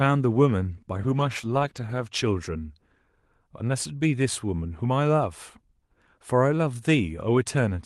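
From 0.97 to 2.23 s the speech goes through a call bitrate drop. It turns rough and watery and loses some brightness, which fits the Opus encoder being pushed from 32 kbps down to about 14 kbps for roughly 1.2 s and coding more coarsely. Unlike packet loss, nothing drops out or stutters; the speech stays continuous but degraded, then returns to the call path's normal 12 kHz bandwidth once the bitrate recovers.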